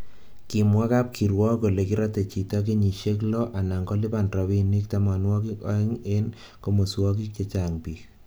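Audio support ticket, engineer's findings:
Speech signal checked across the full clip: no dropouts, level problems or other technical faults heard, so no fault is logged against this ticket.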